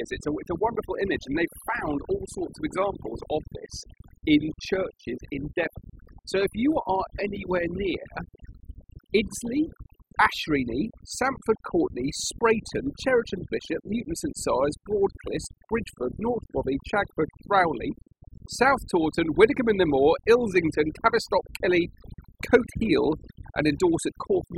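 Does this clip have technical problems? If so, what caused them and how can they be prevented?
Yes. Throughout the speech, the background collapses into near silence flecked with twinkling specks. This is overdone noise removal: a noise reducer set too aggressively cuts individual frequency bands close to its noise estimate, dragging quieter parts of the voice down too. Prevent it by using gentler reduction settings, or by recording in a quieter space so less cleanup is needed.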